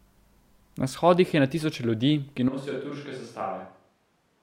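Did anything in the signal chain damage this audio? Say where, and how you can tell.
Yes, at the microphone stage: from 2.49 s to the end the speech suddenly goes hollow and roomy, about 10 dB quieter, likely a switch to a distant microphone.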